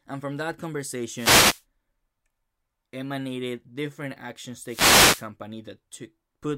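Two wireless microphone noise hits interrupt the speech, from 1.11 to 1.64 s and from 4.64 to 5.28 s. In each, the FM radio link fades as reflected paths cancel, so receiver noise rises and is heard as a brief swish of static.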